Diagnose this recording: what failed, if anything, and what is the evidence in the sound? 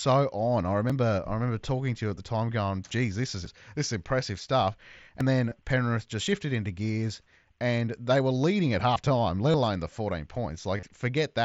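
Driver or buffer stage: the speech jumps forward with no silence at 0.90, 3.46, 5.21, 6.27 and 8.96 s. These are likely dropped buffers from an overrun, each losing somewhere around 20 to 70 ms, with 5.21 s the biggest skip.

Bluetooth link: concealed headset packet loss, with the receiver filling gaps from the last stretch of audio. The single 7.5 ms loss at 2.09 s is barely noticeable. At 9.52 to 9.54 s, 5.49 to 5.58 s and 10.77 to 10.83 s the fill turns buzzy, with a small warble as the mSBC speech returns.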